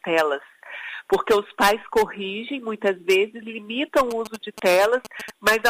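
From 4.11 s to 5.54 s a galloping dit-dit-dit of short buzzes cuts across the sound, the buzz pitched at about 217 Hz and sitting roughly 15 dB below the main signal. These are GSM signalling bursts: a nearby 2G phone is exchanging brief groups of radio pulses with the network, and the audio circuitry rectifies that RF energy, turning the 217 Hz pulse rate into audible clicks and buzz.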